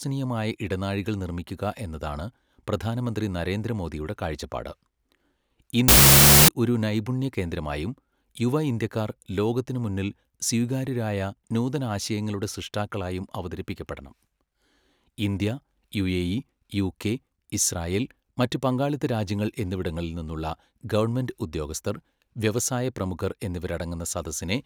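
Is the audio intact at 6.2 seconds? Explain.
No. From 5.88 to 6.48 s, just before "ഒരു നൈപുണ്യ കേന്ദ്രമായും യുവ", the speech turns into loud harsh noise, with the real signal faintly buried inside it, slowed to half speed and an octave lower. This is a wrong sample width fault. Data stored as 32-bit float is being read as 16-bit integers, so each four-byte sample splits into two values. That doubling halves the speed. Only the high halves keep any trace of the waveform, and the low halves come out as noise.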